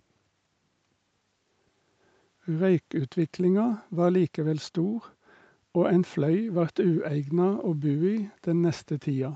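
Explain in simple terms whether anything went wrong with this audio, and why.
Nothing went wrong with this speech recording. It sounds like audio carried over a normal call, with the very top of the sound missing above about 8 kHz, which is simply the expected limit of a call connection and not a fault.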